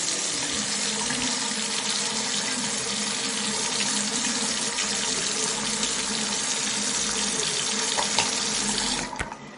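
Throughout, nothing reaches above 10.6 kHz. The sound swirls and attacks smear, plainly audible damage likely from MP3 compression at a low bitrate near 37 kbps.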